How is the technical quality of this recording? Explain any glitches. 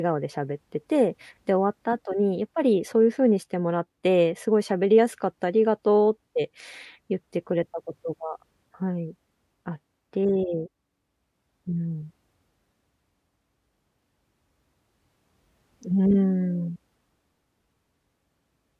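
No technical glitches can be heard anywhere in this recording.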